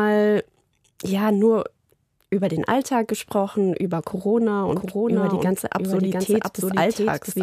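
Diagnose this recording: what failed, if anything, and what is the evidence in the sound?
Doubled audio track, 4.69 s to end: a dry full-band copy about 5 dB quieter trails 0.7 s behind, likely from a slower second capture path.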